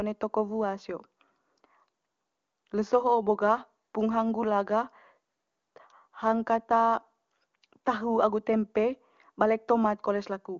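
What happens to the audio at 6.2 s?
Nothing goes wrong at 6.2 s: the speech comes through intact, carried by the AMR wideband (HD Voice) codec at a high rate of about 24 kbit/s, where its coding leaves at most faint traces.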